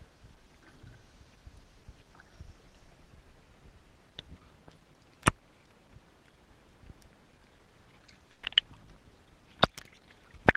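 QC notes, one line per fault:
8.31–8.45 s, burst of packet loss: several consecutive packets never arrived in time, so the receiver stretched the last sound it had across about 120 ms, fading it as it went, then resumed later with that stretch of audio skipped rather than paused.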